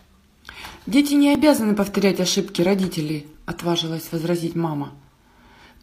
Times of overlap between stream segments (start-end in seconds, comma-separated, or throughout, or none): 1.35-1.39, 3.34-3.37